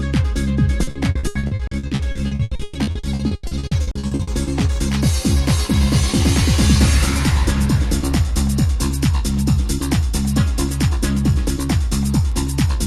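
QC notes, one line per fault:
0.83–4.30 s, repeated packet loss (robotic sound): choppy stutter as dozens of short holes, up to 120 ms, get filled by repeating prior audio, about 44% of the stretch.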